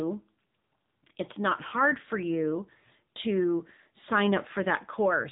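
Throughout, the speech carries AMR narrowband mobile codec damage: buzzy, synthetic voicing consistent with roughly 8 kbps, and a spectrogram showing nothing above 3.8 kHz.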